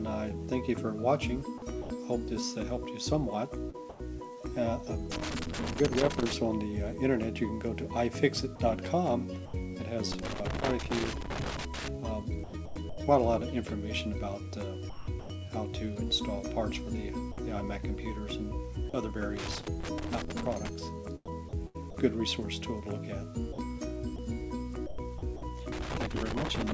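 Call audio, band-limited with nothing above 8 kHz, consistent with a G.722 wideband path. Sound chopped by the voice detector occurs at 1.58–4.00 s, 8.56–9.54 s, 12.44–15.30 s, 17.32–18.94 s and 21.26–25.42 s. Quiet edges drop out and are replaced by synthetic comfort noise, about 257, 120, 560, 100 and 475 ms respectively. The likely cause is the sending side's voice activity detection repeatedly gating transmission. Loose connector crackle appears as irregular bursts of scratching at 5.12–6.33 s, 10.12–11.88 s, 19.37–20.69 s and 25.72–26.74 s. This is a contact intermittently breaking the signal as it moves.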